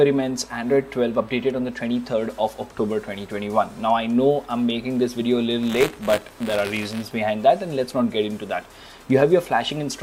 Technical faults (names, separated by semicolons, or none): buffer tearing